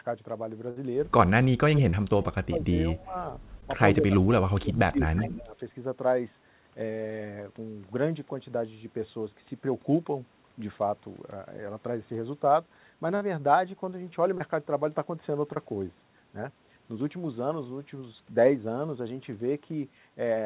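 At 0.70 s a burst of packet loss removes about 60 ms of speech. Roughly 59 ms is filled by stretching the last sound and fading it, so a voiced stretch turns into a brief held buzz, then the speech jumps ahead. On a spectrogram the harmonics run flat and dim before the pattern resumes abruptly. A second burst at 13.16 s behaves the same way, with about 50 ms gone.

From 1.59 to 2.74 s the speech dips, at worst falling by about 30 dB over roughly 0.7 s in total. This is likely speech suppressed in double talk: an echo canceller mistaking both talkers for echo and attenuating everything. The waveform shows chopped, notched envelopes, and the spectrogram thins to faint low energy. Shallower dips of about 15 dB follow from 2.94 to 3.17 s, and deeper ones of about 30 dB, covering about a second, from 4.00 to 5.56 s.

Inside the first suppressed stretch, at 1.90–1.94 s, there is a short concealed packet loss. 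About 30 ms never arrived and was filled by extrapolating the preceding sound, then crossfaded back into real audio. It is heard as a brief smear or wobble. Similar holes occur at 3.61–3.63 s (about 10 ms), 14.38–14.41 s and 15.54–15.57 s (about 20 ms each). Each shows as a tiny smoothed patch of repeated harmonics or noise on the spectrogram.

At 5.16–5.38 s an echo leak lets a delayed copy of the speech through, 138 ms behind it and about 15 dB quieter. It is likely the far-end canceller failing to remove loudspeaker pickup. It sounds like a delayed ghost of the voice. On the spectrogram a faint duplicate of the formant pattern trails the original. A much weaker trace, about 40 dB down, appears at 5.58–5.63 s.

Throughout, nothing sits above 4 kHz, which is consistent with a narrowband telephone codec on the call path.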